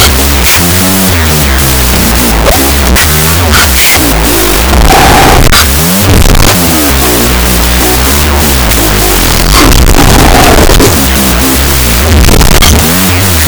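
Speech runs throughout with a wrong sample width fault: 16-bit data read as unsigned 8-bit, so each sample splits into two, halving speed and dropping pitch an octave. The low bytes add loud noise, which a plain sample-rate mismatch would lack.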